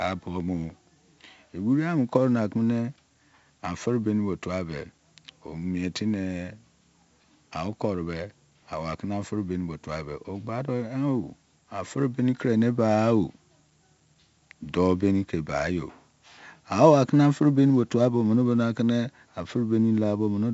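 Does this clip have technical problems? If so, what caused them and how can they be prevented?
Yes. Throughout the speech there is a gritty hiss that rises and falls with the level, loudest on stressed syllables, with harsh distortion on sharp onsets and a dull top end, nothing above 7.7 kHz. This is heavy 4-bit ADPCM compression. Each sample is stored as a coarse step from a prediction, and the step size lags behind fast attacks. The bandwidth points to a 16 kHz sample rate at about 64 kbps. Keep a 16-bit PCM or modern-codec master and avoid ADPCM encoding.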